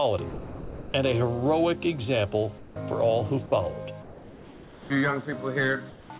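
At 0.3 s the sound gives way to steady, even hiss until 0.94 s, then returns; at 3.46 to 3.52 s and again at 6.18 s, just before the end, it briefly drops out the same way. This is sound dropped by the voice detector: the sender likely judged real sound to be background and stopped sending, so comfort noise filled the gap. On a spectrogram, detailed content abruptly becomes a flat, uniform noise band; the waveform turns into a low, constant-amplitude fuzz.

From 2.58 to 2.76 s, 4.02 to 4.9 s and 5.9 to 6.1 s, the background sitting about 21 dB below the loudest sound is replaced by comfort noise, about 3 to 5 dB quieter and featureless. This is likely discontinuous transmission during pauses. A spectrogram shows smooth, textureless noise where varied background detail was; the waveform shows a slight level step at each edge. Throughout, nothing appears above 4 kHz, which fits G.711 telephone-band coding.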